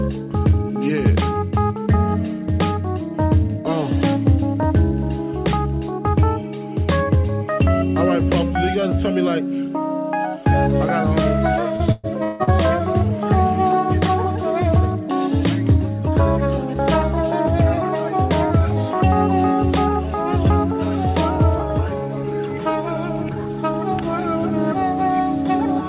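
From 11.76 to 12.50 s the sound breaks into a run of repeated packet loss with a robotic, choppy character. Four holes fall within about three quarters of a second, the longest 160 ms, and the receiver papers over each one by stretching the preceding sound, so nearly half of that span is synthetic fill. The result is a stuttering texture with pieces missing. The audio carries nothing above 4 kHz, consistent with a narrowband call path such as G.711 at 64 kbps.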